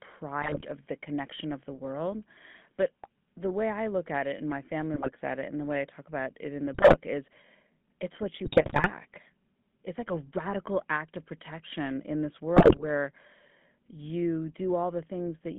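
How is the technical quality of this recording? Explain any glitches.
The recording is speech carried over a GSM full-rate connection, so the whole clip is band-limited and coarse, with five short bursts of bit-error damage on top.

GSM full-rate codec, throughout: the audio sits in a narrow band of roughly 150 Hz to 3.5 kHz, with nothing above. The codec models the vocal tract as a filter and excites it with a sparse, regularly spaced pulse train, discarding two of every three excitation samples. That decimated excitation gives the voice a plainly audible buzzy, gravelly edge, consistent with the 13 kbps full-rate scheme.

GSM bit errors, at 0.42 to 0.62 s, 4.94 to 5.11 s (after "it and my family", before "at it and the"), 6.74 to 6.98 s (after "about it in the"), 8.45 to 8.90 s, and 12.56 to 12.85 s (after "of protection in this"): corrupted bits in the received frames decode into wrong filter shapes, pitch lags or gain values. 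Each burst turns the voice into squawks, pops and gargling for its duration. The longest, near 8.5 s, sounds most sustained.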